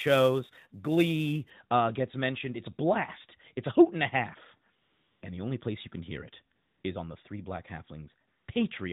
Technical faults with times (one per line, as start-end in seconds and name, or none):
0.00-1.50 sample clock jitter
4.82-5.22 AMR comfort noise
6.56-6.84 AMR comfort noise
8.28-8.48 AMR comfort noise